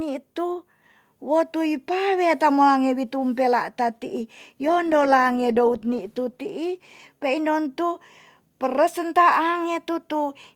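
From 4.65 to 7.39 s, a call bitrate drop starves the encoder, likely from around 32 to 15 kbps, so the speech turns rough, watery and muffled for about 1.7 s.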